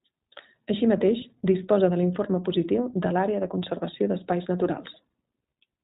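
From start to finish the speech has gone through the iLBC codec, and you can plainly hear it. Everything above 4 kHz is gone, and each short frame is coded on its own, leaving a rough, slightly synthetic edge. That fits the 20 ms mode at around 15.2 kbps.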